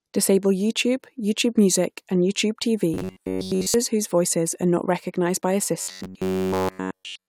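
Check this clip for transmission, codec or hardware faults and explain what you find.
Two bursts of robotic sound from repeated short buffers: 2.94–3.74 s, just before "whose voices", and 5.81–7.28 s, after "not recognized by". Audio likely arrived too seldom, so roughly 10.7 ms snippets were replayed in place of most, then all, of the real signal. The speech becomes a rigid, metallic 93.8 Hz buzz.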